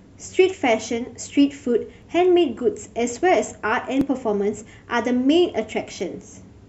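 Short clicks or tiny skips break into this speech recording at 2.02 s, 4.01 s and 6.00 to 6.02 s. They come from overlap between stream segments: timestamps on the 2.0 s segments overlap, so roughly 17 to 20 ms of genuine audio is cut at each boundary, making the waveform jump.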